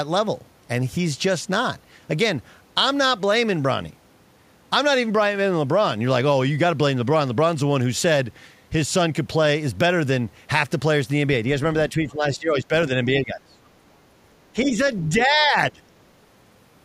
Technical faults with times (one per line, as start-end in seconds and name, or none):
11.90-12.73 speech suppressed in double talk
13.19-13.57 speech suppressed in double talk
14.54-14.78 speech suppressed in double talk
15.09-15.82 speech suppressed in double talk
15.21-15.25 other side's voice leaking through